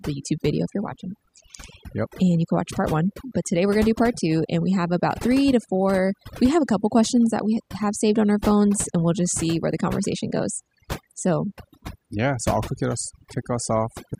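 Overdone noise removal runs throughout: bands near the noise estimate are cut hard, leaving near-silent gaps with twinkling specks.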